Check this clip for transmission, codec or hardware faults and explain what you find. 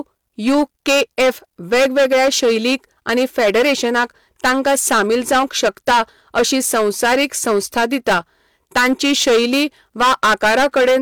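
One fault runs through the whole speech recording. Hard clipping: every loud syllable carries a harsh fuzz, because peaks driven about 15 dB past a stage's limit are cut flat, affecting roughly 15% of the samples.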